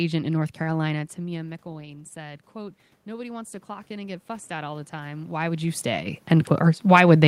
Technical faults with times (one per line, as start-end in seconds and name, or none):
1.17-5.88 automatic gain rising